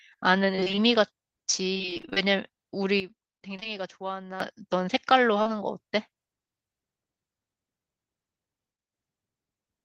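Repeated packet loss (robotic sound) hits this speech recording twice, from 0.55 to 0.79 s and again from 1.73 to 2.18 s. In the first stretch six gaps, none longer than 27 ms, add up to about 120 ms. In the second, eleven gaps of up to 25 ms add up to about 220 ms. Each hole is bridged by extending the preceding sound, and about half of each stretch is synthetic fill. The result is choppy speech with fragments missing.

A sudden gain jump follows. At 3.00 s the level of the speech and the background noise together drops abruptly by about 12 dB, then returns at 4.40 s. The likely cause is a digital gain setting applied step-wise with no ramp.

Short concealed packet loss shows up as a cluster inside that quieter span, between 3.56 and 3.74 s, with holes at 3.60–3.63 s and 3.63–3.67 s. Each hole is about 20 ms of audio, replaced by roughly 15 ms of fill, and the timing shifts by about 10 ms. 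The same fault appears once more at 5.42–5.47 s, where 40 ms goes missing and is patched. Each patch continues the preceding sound and then blends back, leaving a brief smear or wobble.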